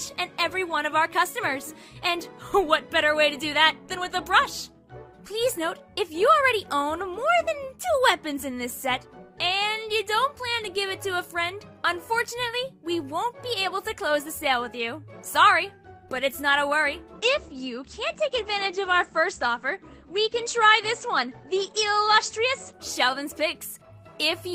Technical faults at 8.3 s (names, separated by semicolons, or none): none